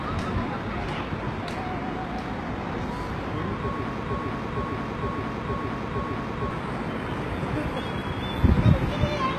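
Throughout the clip, plainly audible HE-AAC compression at a low bitrate, likely around 16 kbps, leaves gritty, metallic treble rebuilt from lower bands. A spectrogram shows nothing above 12.3 kHz.

From 4.03 to 6.51 s, a broken-record loop, likely from a stalled stream, repeats one 0.46 s fragment five times back to back. The waveform shows identical repeating blocks.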